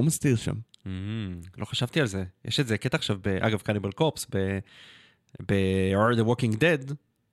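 Nothing goes wrong anywhere in this bit of speech, so there's no technical fault to point to at any moment.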